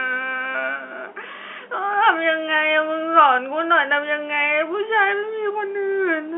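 No technical faults are audible.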